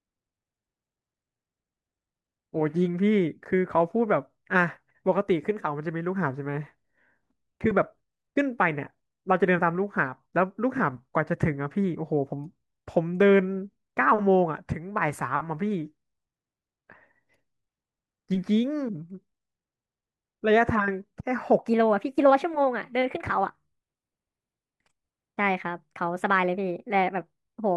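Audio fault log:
21.59–27.77 s: section at the wrong speed. From here to the end the speech runs 1.29 times too fast, so it sounds hurried and sits about four semitones high, with pitch and tempo shifting together. This is likely playback or editing against the wrong clock.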